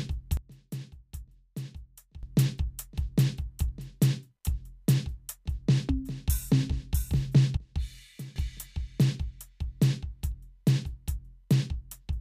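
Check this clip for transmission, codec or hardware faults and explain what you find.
Two sudden gain jumps drop this music abruptly: from 0.37 to 2.23 s it falls by about 14 dB, and from 7.57 to 8.36 s by about 16 dB, with the background sinking and returning in step. The likely cause is a digital gain setting switched between adjacent samples without a ramp.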